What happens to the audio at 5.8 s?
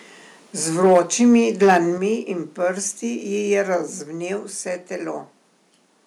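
At 5.8 s the audio is intact, with no dropout, click, distortion or other fault at that point.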